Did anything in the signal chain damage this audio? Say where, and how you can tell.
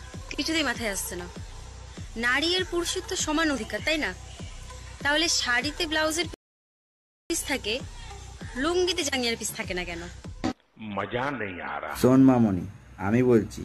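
Yes, there's a rebuffering stall at the playback end. At 6.34 s the sound drops to silence and sits there until 7.30 s, then carries on from exactly the point where it stopped. Nothing is skipped, so you can tell it's a stall and not a dropout. The player ran its buffer dry, waited for more data to arrive, and resumed, which added about 0.96 s of dead air without losing any audio.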